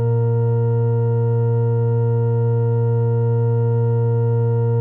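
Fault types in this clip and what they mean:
No faults can be heard in this music clip.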